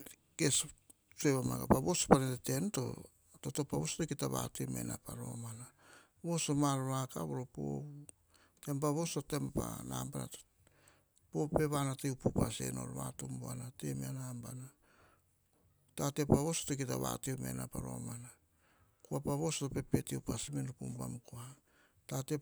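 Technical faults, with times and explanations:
Listening to the speech, nothing stood out as a technical problem at any point.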